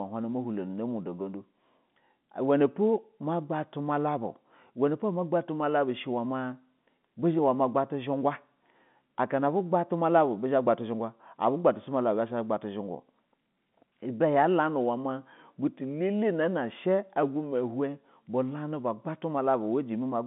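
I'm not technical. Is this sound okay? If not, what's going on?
Yes, nothing in this speech recording stood out as a problem when listening.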